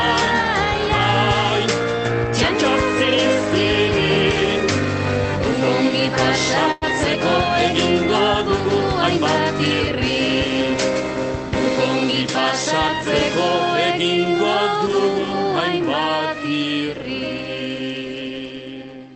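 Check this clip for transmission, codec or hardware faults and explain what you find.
One transmission fault is audible, a call audio freeze, over a band-limited call path with an upper limit near 8 kHz, consistent with Opus at about 32 kbps.

From 6.71 to 6.84 s, the sound stalls into a fading buzz or hiss for about 100 ms. The likely cause is the jitter buffer running dry, so the playout resumed later with nothing lost.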